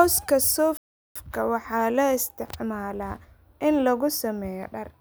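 Speech runs for a moment before a playback stall cuts it off at 0.77 s. The output stays silent for about 0.38 s until 1.16 s, and then resumes on "waxaa loo". The likely cause is the player running out of data or its thread being blocked. A natural pause would fall between phrases, but here the sound stops abruptly in mid-flow. A brief dropout would last only a few milliseconds, while this stall is a clearly audible gap.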